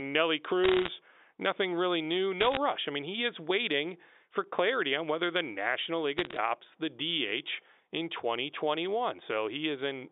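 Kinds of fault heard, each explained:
Bit errors on a digital phone line: flipped bits on the G.711 link corrupt single samples, so you get sharp ticks and crackle over the speech, in short bursts at 0.64–0.88 s just before "nothing really new", 2.41–2.57 s right after it, and 6.18–6.37 s.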